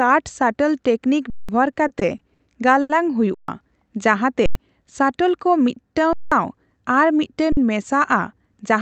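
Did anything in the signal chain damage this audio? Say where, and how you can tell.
Yes, at two stages. The worst is the output buffer: five underruns with held sample at 1.30–1.49 s, 3.34–3.48 s, 4.46–4.55 s, 6.13–6.32 s and 7.52–7.57 s, lasting roughly 186, 139, 93, 186 and 46 ms. The waveform freezes flat, so the sound just stops, and live audio was dropped meanwhile. The lengths fit whole buffers of 8192, 6144, 4096 and 2048 samples at 44.1 kHz.

Between 1.73 and 2.41 s there's repeated stalling (stutter) from the network side of the call path. The jitter buffer ran dry five times, with the longest wait about 60 ms. The receiver stretched the last sound each time, adding 140 ms of filler, roughly a fifth of that stretch. Nothing is actually missing, but the audio drags and hiccups because packets were arriving late or slower than real time.

At 2.81–2.91 s there's one short stall from a late packet. 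Network delay jumped by 80 ms, so the jitter buffer emptied and the receiver held the last sound for 80 ms until the packet arrived, then picked up exactly where it left off. You hear a single drawn-out moment with a faint buzz or dip rather than a gap, and no audio is skipped.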